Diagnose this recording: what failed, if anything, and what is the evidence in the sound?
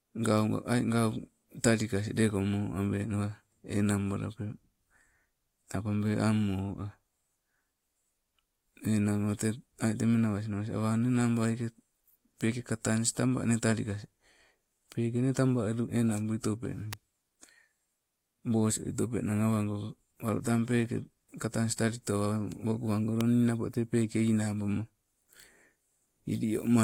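Two sharp snaps sit on top of the speech, one at 16.93 s and another at 23.21 s, just before "nnapo tee peeke". Each lasts only a few milliseconds and peaks fairly loud, somewhere near -15 dBFS. That's an electrical switching spike picked up in the analogue wiring. Most likely a nearby switch, relay or static discharge arced, and the cable or input caught the burst as a click laid over the audio.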